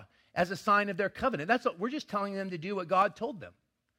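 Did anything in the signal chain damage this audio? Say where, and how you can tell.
Yes. A single loud pop sits at about 3.02 to 3.04 s, peaking a few decibels above the speech, which continues underneath it. The likely culprit is the analogue stage: a voltage step from a plug, switch or static discharge entering the chain, then being shaped by the circuitry downstream. On a waveform it shows as one sharp spike standing out from the speech envelope. On a spectrogram it is a thin vertical stripe spanning the full frequency range.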